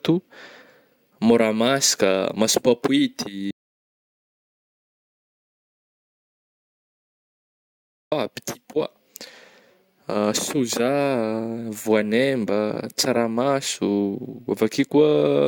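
At 3.51 s the speech just stops dead and the track goes to silence until 8.12 s, so roughly 4.6 seconds of talking is simply gone. That's an audio dropout to silence: no room tone, no hiss, nothing in the gap, and the speech picks up again mid-flow when the signal returns. The likely culprit is the input being lost for a while, a loose connection or stray mute, while the recorder kept writing silence.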